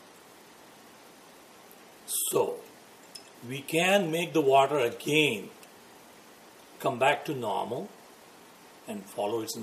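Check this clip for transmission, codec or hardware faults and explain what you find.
No transmission, codec or hardware faults can be heard anywhere in the signal.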